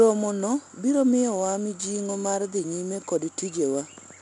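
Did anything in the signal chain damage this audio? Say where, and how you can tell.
Yes, at the codec stage: 4-bit ADPCM compression across the whole clip. The speech carries a gritty hiss that tracks its level, attacks smear, and nothing comes through above 10.7 kHz. That points to a low sample rate, with a bitrate around 89 kbps.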